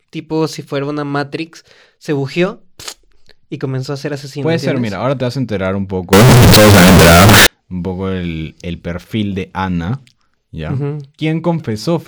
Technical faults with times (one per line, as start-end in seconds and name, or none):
6.13-7.47 float read as integer